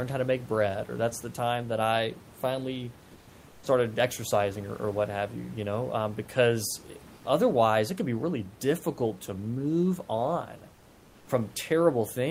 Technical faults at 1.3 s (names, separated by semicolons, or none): none